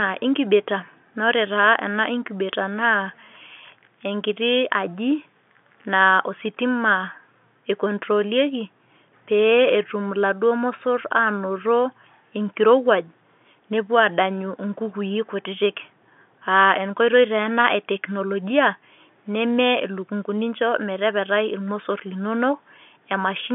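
No technical faults can be heard anywhere in this speech.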